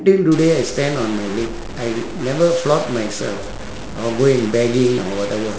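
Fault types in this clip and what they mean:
Stuck bit: one data line or converter bit has likely become fixed at a single value, so roughly half the samples carry an error equal to that bit's weight, a step of around -25 dBFS, which marks a fairly high bit. From 0.32 s to the end, the speech turns harsh and buzzy. Because the error flips with the sign of quiet samples, the pauses fill with a prominent noise instead of falling silent.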